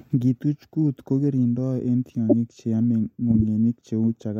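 At 2.29 to 2.33 s and 3.30 to 3.37 s, corrupt frames were decoded. Damaged data put energy at wrong frequencies, giving brief noisy squeaks. The first peaks around -5 dBFS, the second quieter.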